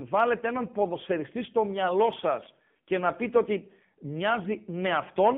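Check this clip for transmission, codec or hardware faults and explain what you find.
The whole clip has gone through the AMR narrowband mobile codec. Throughout the speech, everything sits between about 150 Hz and 3.5 kHz, with nothing up top. The codec runs at 8 kHz and rebuilds the voice from a vocal-tract model fed by a few pulses per 5 ms slice. The damage is plainly audible: a buzzy, synthetic edge that fits one of the lower modes, around 7.4 kbps.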